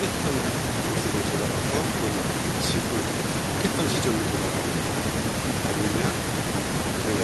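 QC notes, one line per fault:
No faults heard on the speech; nothing to log.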